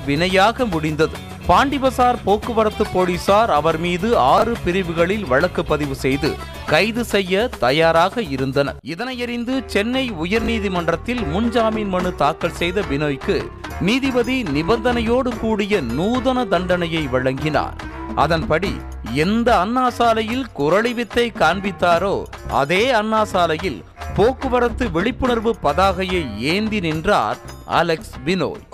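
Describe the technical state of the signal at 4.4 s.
Right around 4.38 to 4.42 s there's a chunks-out-of-order glitch: one 20 ms chunk turns up a chunk late and plays after the one meant to follow it. Nothing goes missing, but the swap leaves hard joins, so you get a quick jumbled flicker.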